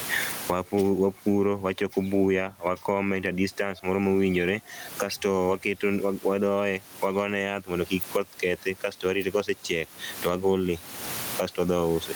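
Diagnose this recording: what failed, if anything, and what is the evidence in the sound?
The problem is gain pumping, and it runs the whole length of the speech. Listen to the gaps: the room noise sits about 31 dB under the talker, and the gain swings by roughly 25 dB. Loud and quiet passages come out squashed toward one level. The likely cause is input gain set far too high at the microphone stage, with a fast limiter or compressor clamping down on every loud sound.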